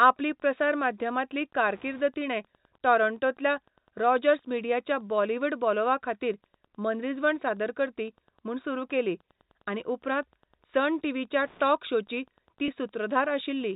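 Wi-Fi interference runs through the whole recording as a faint, steady ticking about ten times a second, roughly 40 dB below the speech. A nearby Wi-Fi radio's beacon, repeating every 102.4 ms, is being picked up and rectified by the audio circuit, so each transmission becomes a small click. On a spectrogram it shows as thin vertical lines evenly spaced 102.4 ms apart, spreading across the telephone band. In the waveform it appears as tiny regular spikes, clearest in pauses.

At 12.66 to 12.68 s there is packet loss with pitch repetition. A 20 ms gap, which fits a single lost packet, was filled by repeating the last pitch period. Because the gap is short, it sounds like a brief held, buzzy smear in the speech rather than a dropout. The spectrogram shows a short stretch of frozen, evenly spaced harmonics. The waveform shows repeating, fading cycles there before normal variation resumes. 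The G.711 telephone band limit, with nothing above 4 kHz, is visible around it.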